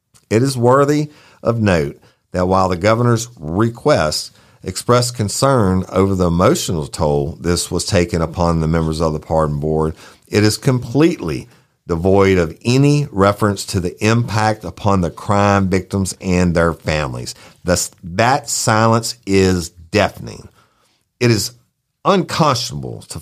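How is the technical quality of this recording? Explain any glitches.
Listening closely, nothing in the technical quality of this speech recording stood out as a glitch.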